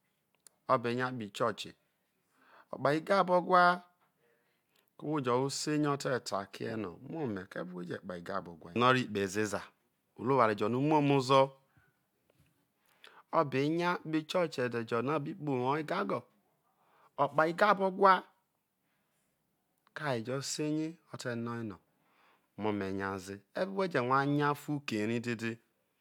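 No technical faults can be heard.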